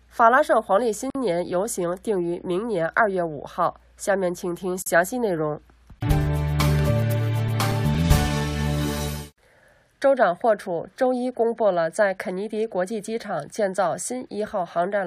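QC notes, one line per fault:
1.10–1.15 s and 4.82–4.86 s: gap at a join of encoded pieces. Continuous sound drops out for about 49 ms, then about 40 ms, with smeared edges before carrying on where it stopped. Separately encoded sections were joined without trimming encoder delay and final-frame padding.
6.79–9.33 s: CD scratch ticks. Twelve short ticks, the longest a few milliseconds, arrive at a steady rate near five per second, of uneven strength. A surface blemish defeats error correction once per disc rotation, leaving interpolated or muted samples.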